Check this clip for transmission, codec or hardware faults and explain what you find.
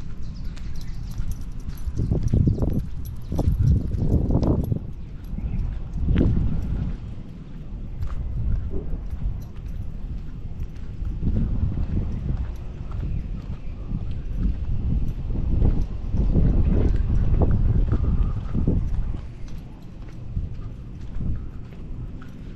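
No transmission, codec or hardware faults.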